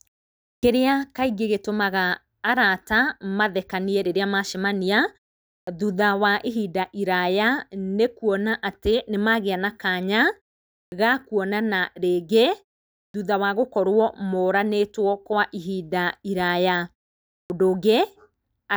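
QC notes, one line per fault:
0.59 s, 5.63 s, 10.88 s, 13.10 s (before "thutha wa") and 17.46 s: clipped start after a pause. Each time the sound resumes after roughly half a second of silence (0.53 to 0.59 s), about 39 to 44 ms of its onset is missing, so the speech begins abruptly without its first sounds. The output path appears to idle during the gap and needs around 40 ms to wake and relock before it passes audio again.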